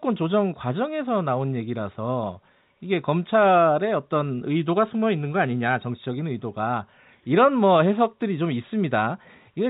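Nothing's wrong with this speech recording; it just carries the narrow, phone-line sound of G.711 telephone coding, with the top end stopping short of 4 kHz as that format always does.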